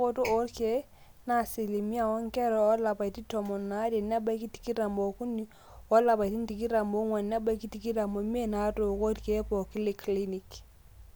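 Nothing is technically wrong with this recording of speech.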